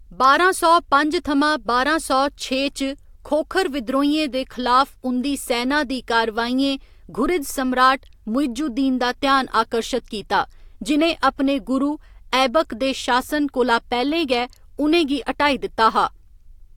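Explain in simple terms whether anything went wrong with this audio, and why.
Listening to the recording, nothing in the speech stood out as having gone wrong.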